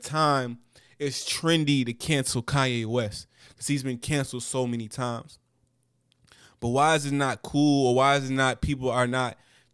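No technical faults can be heard anywhere in this speech recording.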